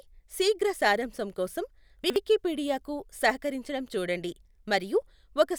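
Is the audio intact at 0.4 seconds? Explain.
Yes, the speech at 0.4 s plays through cleanly, with no dropout, click, distortion or other fault at that moment.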